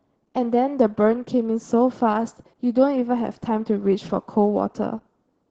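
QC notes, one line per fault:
Throughout, Opus voice compression: the speech is cut off at 8 kHz, the wideband limit of the SILK linear-prediction coder, so sibilants lose their top and the sound is muffled. SILK models the voice as a filter driven by a coarsely quantised excitation, and at this heavy level of damage that coarse excitation gives a hoarse, slightly robotic grain. The degree of damage points to a bitrate near 10 kbps with 20 ms frames.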